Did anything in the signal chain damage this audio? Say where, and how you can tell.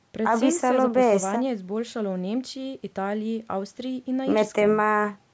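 No, nothing in the chain has damaged this speech: the call microphone processing is working as designed, and the missing lowest bass and the absence of content above 8 kHz are normal for that stage.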